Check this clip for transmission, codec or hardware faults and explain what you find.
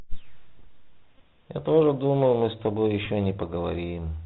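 Two things stand out: a narrowband headset codec across the whole clip, and two short packet-repeat glitches.

The Bluetooth CVSD headset codec runs from start to finish. It's one-bit delta coding with an adaptive step, and the sound fits the 64 kbps CVSD link. Nothing gets through above 4 kHz, s sounds come out scratchy, and there's a grainy hiss sitting under the speech throughout.

There are Bluetooth headset packet repeats at about 1.19 s and 3.05 s. Packets dropped between headset and phone, and the chip re-decoded the last good one. The first gap is about 18.8 ms, which fits five packets, and the second is about 11.2 ms, roughly three. Each is a brief buzz near 267 Hz.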